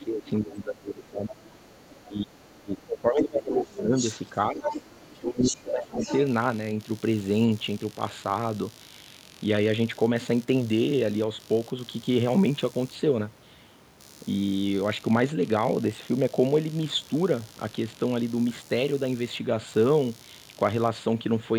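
Under the whole clip there's computer activity noise, a buzzy pulsing at roughly 70 Hz, about 30 dB below the speech. It likely comes from processor or graphics load shifting the shared ground, so it follows the machine's activity rather than the talker.

From 0 to 1.35 s the talker's speech sinks by up to about 20 dB. That is speech suppressed in double talk: with both ends talking, the echo canceller likely couldn't tell the near voice from the loudspeaker echo, so it ducked everything. At the same time, from 0 to 0.55 s and again from 1.29 to 1.98 s, the other side's voice leaks through about 20 dB down, probably because the canceller left some of the loudspeaker signal in the mic.

From 2.06 to 3.93 s the speech dips again, this time by up to about 25 dB. Within that stretch a short scrap of leakage shows up at 3.51 to 3.55 s, about 15 dB down. Another scrap follows at 3.96 to 4.14 s, only about 10 dB under the speech.

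The third suppression runs from 4.32 to 5.96 s, with the speech down by up to about 20 dB. Overlapping it, the longest leak runs from 4.61 to 6.25 s, again about 10 dB below the speech.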